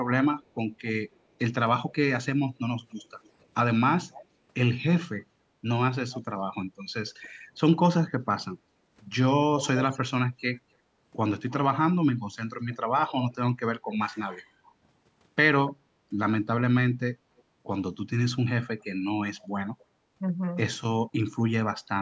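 Echo leak from 0.42 to 1.96 s and again from 4.12 to 7.3 s: a faint delayed copy of the speech trails the voice by about 290 ms (288 ms, then 290 ms). It likely comes from the far end playing the call on a loudspeaker, where the echo canceller failed to remove everything its microphone picked up, so the remainder was sent back. The copy sits about 25 dB below the speech in the first stretch and about 20 dB below in the second.

Background gated by the echo canceller at 8.62 to 8.87 s: the room sound dips by about 10 dB for roughly a fifth of a second. While the loudspeaker was playing, the canceller pulled the microphone down hard and then released it, so the background briefly thins and returns.

Echo leak from 9.59 to 15.73 s: this is the longest and strongest stretch. The echo arrives 292 ms behind the speech at about 15 dB below it.

Background gated by the echo canceller at 15.9 to 16.01 s: a shorter dip of about 11 dB, lasting well under a tenth of a second, as the canceller clamps the microphone and lets go again.

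Echo leak from 17.37 to 19.85 s: the echo returns 295 ms behind the speech. At about 30 dB down, it is the faintest of the four stretches. Throughout, the call's microphone processing leaves nothing above 8 kHz, which is normal band-limiting and not a fault.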